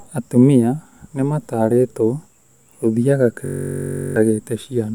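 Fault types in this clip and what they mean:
System hang loop: the machine froze while the sound hardware kept replaying one buffer. From 3.46 to 4.16 s, a 21.33 ms slice repeats 33 times, giving a steady 46.9 Hz buzz. This fits a 1024-sample buffer. Roughly 0.7 s of speech is lost.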